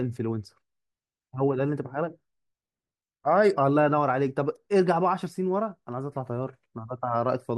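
Speech recording with no technical faults to report. There is nothing here that calls for a time stamp or an explanation of cause.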